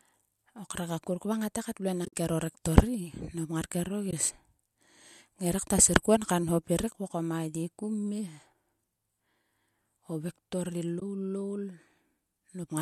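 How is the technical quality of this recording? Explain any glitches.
The recording has three short dropouts, each a case of AAC frame loss with muting. Beneath them, a light graininess in the speech likely comes from low-delay AAC compression (AAC-ELD at 64 kbps).

AAC frame loss with muting occurs at 2.05–2.13 s, 4.11–4.13 s and 11.00–11.02 s, the last just after "vektor ri". When frames went missing, the decoder set their spectrum to zero, and the overlapping windows fade the speech down and back up, leaving soft-edged holes. The first dropout loses about 70 ms of sound scattered over 80 ms, and its longest gap is about 50 ms, which fits 10 ms frames. The other two each last 20 ms.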